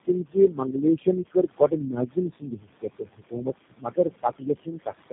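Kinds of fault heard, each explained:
Noise suppressor artifacts: The suppressor pulls down whatever frequency bands it judges to be steady noise, working frame by frame. Here it cuts that noise by about 18 dB. The room noise sits about 15 dB below the speech and dips between phrases. It comes back up underneath them.
Tandem speech coding: The call passes through several speech codecs in turn. It is decoded and re-encoded at each handover. Three low-rate coders sit in the chain: GSM full rate and G.729A twice, with G.711 links between them. Each one works on damage the last one left. Nothing remains above 3.7 kHz, so the sound is muffled. It is rough and grainy, with more warble than any single codec would produce.
Speech cut by the noise suppressor: The suppressor mistakes parts of the speech for background noise and turns them down along with it. Soft consonants, word endings and quieter stretches sound swallowed or faint. 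It happens across three spans: 0.07 to 1.07 s, 1.23 to 3.48 s and 3.69 to 4.93 s. The deepest drops reach about 18, 21 and 22 dB. Roughly half a second, a second and a half, and under a second of sound lose level.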